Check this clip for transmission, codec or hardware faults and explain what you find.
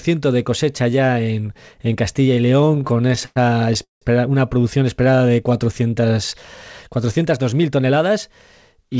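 Four network-timing faults are audible, all typical of audio carried over a call link. The sound also has nothing above 8 kHz, which fits a wideband call codec such as G.722.

Repeated stalls (stutter), 2.62 to 3.38 s: the jitter buffer ran dry about fifteen times, and the receiver stretched the last sound to bridge each gap. The longest gap is 104 ms, and about 31% of the span is filled. It drags and stutters. A spectrogram shows repeated smeared, flat-lined patches.

Call audio freeze, 3.84 to 4.03 s, just before "una producción": delayed packets likely emptied the buffer. The receiver continued the last sound briefly, then went silent for about 150 ms, inserting 177 ms of delay. The waveform shows a fading tail followed by a flat gap, after which the sound resumes intact.

Jitter buffer slow-down, 4.98 to 5.55 s, after "una producción": to rebuild its reserve, the buffer repeated pitch periods, adding 67 ms. 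Playback runs at 89% speed with unchanged pitch, so sounds are drawn out. On a spectrogram, harmonics keep their spacing but stretch horizontally.

Jitter buffer speed-up, 7.52 to 8.11 s: with too much audio queued, the receiver cut out pitch-period slices totalling around 70 ms. The sound runs at 109% speed and feels hurried, with no pitch change. The spectrogram shows compressed segments with subtle discontinuities at the splice points.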